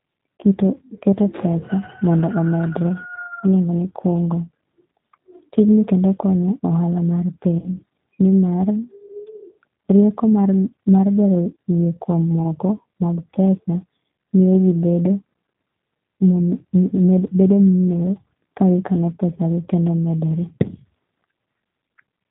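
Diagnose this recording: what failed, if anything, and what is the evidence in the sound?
G.729 codec damage runs through the whole speech clip, at the codec stage. The voice is band-limited to about 4 kHz and sounds rough and synthetic, consistent with an 8 kbit/s G.729A coder rebuilding each frame from a vocal tract filter, pitch predictor and a few pulses.

VoIP packet loss concealed by the speech codec, a network fault, appears at 7.59 to 7.70 s and at 12.40 to 12.42 s. The decoder stretched its last pitch and filter into a fading buzzy tone or coloured noise, fitting roughly three lost 10 ms frames, then one.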